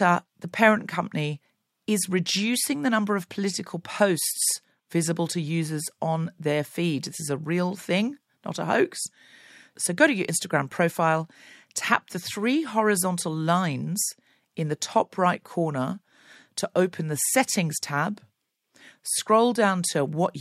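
No technical faults detected.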